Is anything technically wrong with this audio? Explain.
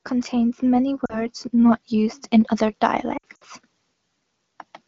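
Yes. From 0.08 to 2.28 s the automatic gain is rising: the gain control judged the incoming level too low and kept raising its gain, by about 8 dB in total. Because it amplifies everything together, the speech and the background noise swell upward as one over those two seconds, with no sudden step.

There are also lost AMR speech frames in two places. Radio errors corrupted frames, so the wideband decoder filled the gaps by reusing the last good pitch and vocal-tract settings at falling gain. At 1.05 to 1.26 s about 40 ms is missing, which fits two 20 ms frames, and this comes through as a short dip. From 3.17 to 3.44 s about 120 ms is lost, scattered over roughly 240 ms, with the longest gap around 60 ms. The sound drops quickly towards near silence, and returns thin and rough between the gaps, heard through the lightly coloured wideband coding.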